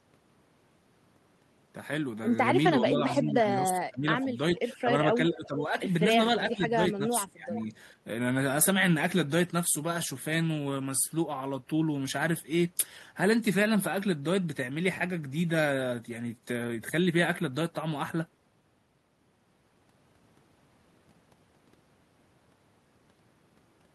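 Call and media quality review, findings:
Speech suppressed in double talk: dips of up to about 15 dB at 2.81–4.27, 4.55–4.88, 5.15–5.72, 6.45–6.78 and 6.96–7.69 s. Likely the far-end echo canceller ducking both talkers while they overlap.

Echo leak: faint delayed copy, about 0.42 s behind and about 15–20 dB down, at 4.21–4.25, 4.56–4.76 and 7.55–7.64 s. Likely residual loudspeaker echo the canceller missed.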